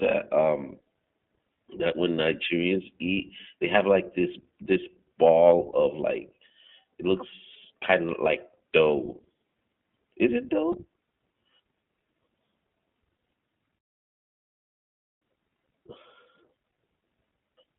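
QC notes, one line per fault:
throughout: iLBC codec, narrowband coding fitting its 15.2 kbps, 20 ms-frame mode, plainly rough and synthetic; spectrogram shows nothing below about 150 Hz or above 3.4 kHz.
5.72–5.75, 7.54–7.56, 10.72–10.76: lost iLBC frames, each a single missing frame filled by a repeated pitch cycle, heard as a brief buzzy held vowel; spectrogram shows flat, repeated harmonics.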